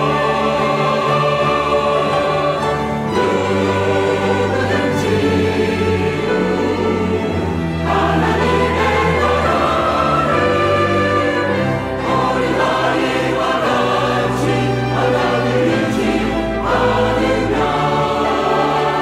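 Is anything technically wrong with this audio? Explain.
No, nothing technically wrong turns up anywhere in this audio.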